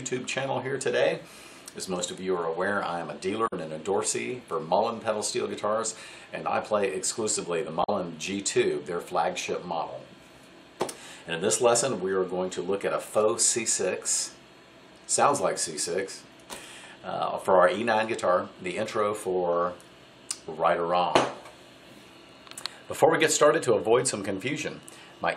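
At 3.46 to 3.53 s and again at 7.83 to 7.90 s, each lasting about 70 ms, there is damaged data in a compressed stream. Corrupted bytes in the encoded file make the decoder misread or reject the frames at these points and lose sync until it finds the next valid frame header. The result is a brief disturbance such as a chirp, squawk, click or short hole. On a spectrogram each event appears as a narrow vertical smear or gap breaking the normal texture. On a waveform it shows as an abrupt discontinuity.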